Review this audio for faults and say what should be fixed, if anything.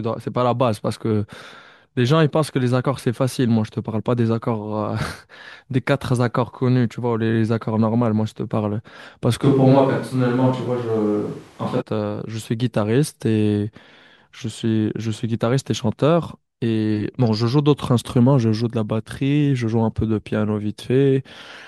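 From 9.45 s to 11.80 s the speech turns abruptly roomy and hollow, loses bass, and picks up room noise about 30 dB below it, then snaps back, which is likely a switch to a distant microphone. Level stays roughly unchanged, and the hard edges at both ends, with the hollow, thin tone, set it apart from added reverb, which would not shift the noise floor or cut in so suddenly. Monitoring the close microphone during recording and keeping a backup lavalier would prevent the fallback.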